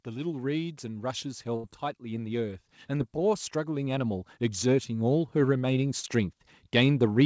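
From 0.05 s to the end, voice and background swell together in a slow, steady climb. This is automatic gain rising: the automatic gain control judged the input too quiet and kept raising its gain gradually across the whole clip.

At 1.56 to 1.66 s, the last sound is held and fades away for about 77 ms, then the speech picks up further along, with roughly 80 ms missing. This is a burst of packet loss. Several packets arrived too late or not at all, so the receiver stretched and faded the previous audio before jumping ahead.

Two briefer disturbances follow, at 2.98 to 3.02 s and 6.00 to 6.05 s. Each is a short smear or wobble where the sound blurs momentarily. This is short concealed packet loss. About 20 ms and then about 40 ms of audio never reached the decoder in time, and the receiver filled each hole by continuing the preceding sound before blending back. All of this sits on a call path whose codec leaves nothing above 8 kHz, which fits G.722.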